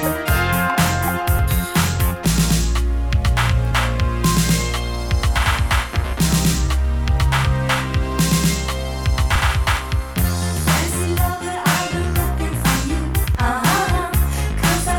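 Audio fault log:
1.39 s, 9.36–9.38 s and 13.35–13.38 s: overlap between stream segments. At these joins between 4-second segments, overlapping time stamps make the player discard 17 to 29 ms of sound that was never doubled, so the waveform jumps, giving a brief click or skip.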